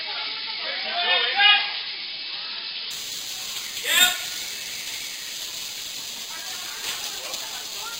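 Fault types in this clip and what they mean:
Imaging from sample-and-hold upsampling: from 2.91 s to the end, audio at about 11 kHz was raised to 48 kHz by repeating each sample without a smoothing filter, so mirrored copies of the spectrum fold around multiples of about 11 kHz. The lowest copy fills roughly 5.5 to 11 kHz at about 6 dB below the signal, heard as a bright metallic fizz. A spectrogram shows inverted, mirrored bands, and the waveform looks staircased.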